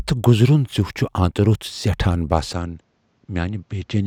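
Speech that, from 2.53 s to the end, turns duller, with nothing above 7.8 kHz, drops about 5 dB and gains a faint new noise floor. The seamless switch likely comes from the input switching to a poorer device, unlike a plain filter change.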